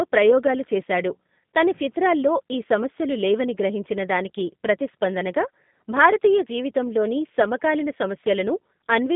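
From start to finish the speech carries G.729 codec damage: content stops near 3.8 kHz, with the line passing roughly 150 Hz to 3.6 kHz. Unlike plain band-limiting, the voice also sounds rough and synthetic, rebuilt from a few pulses, which fits an 8 kbit/s stream.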